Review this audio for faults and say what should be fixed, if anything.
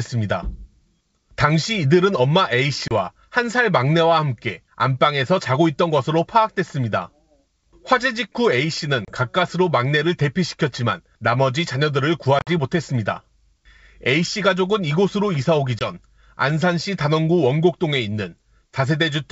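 Packet loss on an ADPCM call causes hard-edged silent holes at 2.88–2.92 s, 9.05–9.14 s, 12.39–12.52 s and 15.79–15.87 s. The 12.39 s hole is the worst, with 70 ms missing and its longest run about 50 ms. After each gap the speech returns slightly distorted. That happens because the decoder's predictor and step size drifted from the sender's. Unlike a plain dropout, the damage lingers for tens of milliseconds afterwards. Adding packet loss concealment with decoder state resynchronisation, plus a jitter buffer or redundancy, would prevent it.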